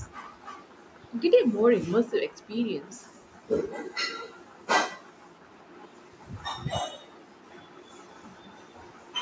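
From 7.47 s to 9.15 s the speech carries an echo leak: a very faint copy of the talker returns about 250 ms behind the original, sitting well under the direct speech. This is likely the far end playing the call on a loudspeaker, with its echo canceller leaving residual pickup from that speaker and sending it back. The band stops at 8 kHz, consistent with call microphone processing.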